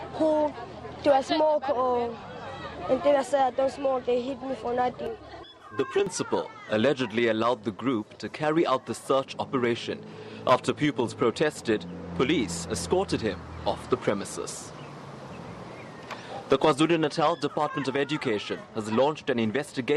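At 5.07 s the sound suddenly goes hollow and phasey, and it stays that way until about 6.07 s. That's channel delay, which gives you comb filtering. One side is running late by roughly 3 ms, and when the two get folded to mono, whatever they share cancels at regularly spaced frequencies. The first notch sits somewhere around 200 Hz, with more stacked evenly above it. That's what gives it that hollow, scooped-out colour for the second it lasts.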